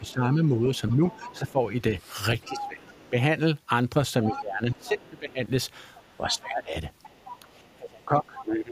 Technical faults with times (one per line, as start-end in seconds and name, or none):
0.00-3.15 speech suppressed in double talk
0.07-3.09 other side's voice leaking through
4.24-7.39 other side's voice leaking through
4.29-8.72 speech suppressed in double talk
8.40-8.44 other side's voice leaking through